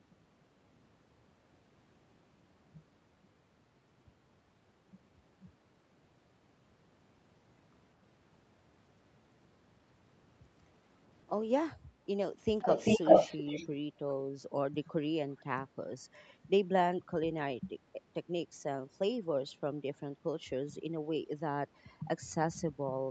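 From 12.58 to 13.67 s, a delayed copy of the speech follows the original by 395 ms, at a level a little above the speech itself. This is an echo leak, likely from a loudspeaker on the far end whose echo canceller let that sound return down the call.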